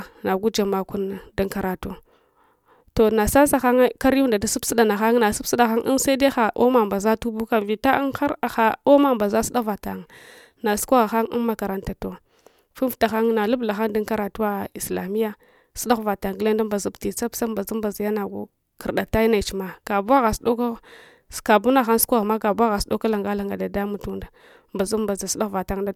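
No technical faults can be heard anywhere in the speech.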